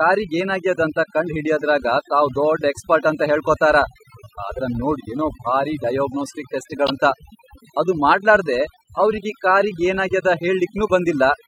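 Overdone noise removal runs through the whole clip. A noise reduction stage set far too aggressively pulls individual frequency bands down or out entirely whenever they sit close to its noise estimate. The quieter components of the speech vanish along with the hiss. Between phrases the background drops, scattered with small twinkling specks.

At 6.86 to 6.90 s, just after "ಏನೋ ಭಾರಿ ಡಯಾಗ್ನೋಸ್ಟಿಕ್ ಟೆಸ್ಟ್", there is a brief glitch of about 43 ms whose likely cause is a broken MP3 bit reservoir. The sound jumps forward. This fits frames being lost from the stream: the following frame reaches back for borrowed bits and decodes bytes belonging to another frame. The stream uses frames of roughly 26 ms.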